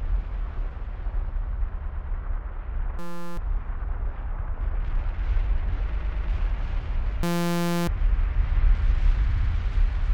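At 0.42 s a 23 ms stretch restarts itself once, then from 1.84 to 2.07 s a 116 ms stretch stutters through two extra plays. These are repeated frames: compressed blocks were sent again and decoded again, so the timeline stretches by the replayed length. From 2.99 to 3.37 s a steady buzz appears at 172 Hz. This is a system hang loop, where the hardware cycled one 5.8 ms piece of audio, which fits a 256-sample buffer, while the system froze, and roughly 0.4 s of audio never arrived. More repeated frames follow: a 93 ms block replays once from 4.39 to 4.48 s, and a 116 ms block plays three extra times from 5.92 to 6.27 s. The same 172 Hz buzz returns from 7.23 to 7.88 s, the hang loop again, and this time about 0.7 s of audio goes missing. Finally, from 9.29 to 9.50 s a 70 ms block stutters through three extra plays.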